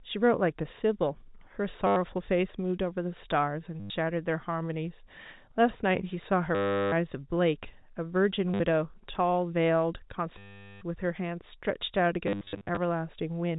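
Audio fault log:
1.87–1.96, 3.8–3.9, 6.55–6.92, 8.54–8.6, 10.38–10.81 and 12.27–12.77 s: packet loss with last packet repeated. The last chunk loops, buzzing near 100 Hz (consistent with 10 ms packets), a robotic stutter rather than silent dropouts. The final stretch breaks into short bursts.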